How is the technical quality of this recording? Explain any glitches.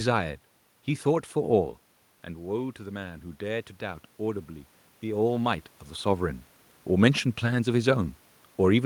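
There's one real glitch here, an automatic gain rising episode. From 2.53 s to 5.31 s the level creeps up by about 3 dB. The input had dropped by about 10 dB, so the gain control decided things were too quiet and slowly turned itself up to compensate. You hear it as a gradual swell, with the speech and the room noise behind it getting louder together over those few seconds. The level shifts around 1.5 s and 5.5 s are just the talker moving relative to the mic, not the system.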